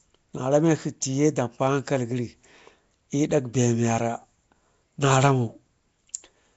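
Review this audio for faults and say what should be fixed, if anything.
Throughout, the speech sounds rough, hissy and smeared, as if underwater, with nothing above 7.7 kHz. This is likely Nellymoser compression, which starves weak bands of bits and fills them with noise. Capture and deliver through a modern codec such as Opus or AAC at an adequate bitrate rather than Flash's Nellymoser path.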